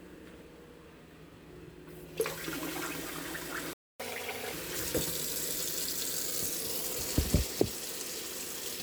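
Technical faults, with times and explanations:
3.73–4.00 s, playback stall: the sound halts mid-flow for about 265 ms and then resumes exactly where it stopped, with nothing skipped. That sets it apart from a dropout, which loses material. The player likely ran out of data or had its thread blocked.
4.00–4.53 s, catch-up at higher speed: right after the stall the audio runs 1.5 times faster, and pitch rises by roughly seven semitones as the player resamples its backlog to win back the lost time. Both speed and pitch then return to normal together, which distinguishes it from a pitch-shift fault.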